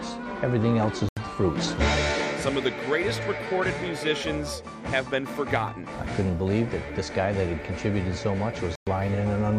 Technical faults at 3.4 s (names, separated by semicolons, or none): none